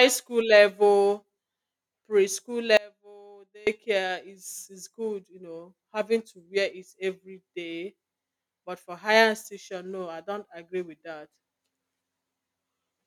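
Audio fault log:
2.77–3.67 s, audio dropout to a faint residue: the speech cuts out abruptly for about 0.9 s and comes back just before "is is good you", and the gap isn't silent but holds only a faint sound, roughly 25 dB below the signal's normal level. The hard edges at both ends set it apart from a natural pause or fade. The likely cause is a brief loss of the wanted feed while the path downstream stayed live, passing only a faint residue through.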